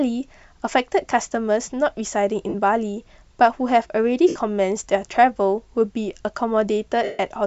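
Speech with lost LE Audio frames at 2.49–2.55 s, 4.28–4.36 s and 7.04–7.19 s. At each gap the LC3 decoder's concealment repeats the last spectrum with scrambled phase, giving a noisy smear, and the longest dropout, about 150 ms, fades toward silence.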